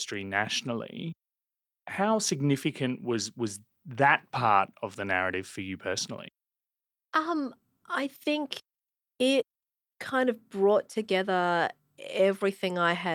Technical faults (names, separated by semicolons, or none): none